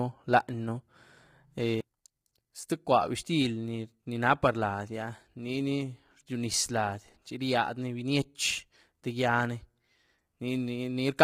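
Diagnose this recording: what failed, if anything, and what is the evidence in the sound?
The codec stage failed: throughout the speech the voice sounds rough and grainy, with noise filling the gaps between harmonics and a thin, synthetic top band. This is likely low-delay AAC compression, with short frames resolving pitch poorly and heavy damage that fits a bitrate near 24 kbps.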